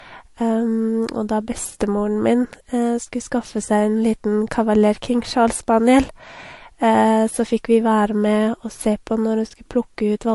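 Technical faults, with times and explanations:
Throughout, transcoding between lossy codecs: nothing reaches above about 11.3 kHz, and the speech carries two layers of coding damage at once, the artefacts of both codecs heard together. This is likely audio encoded once and then re-encoded, the pattern fitting a low-rate MP3 pass followed by a similar-rate Vorbis pass. The second encoder wastes bits reproducing the first one's artefacts and adds its own, while the lowest band limit in the chain stays in place.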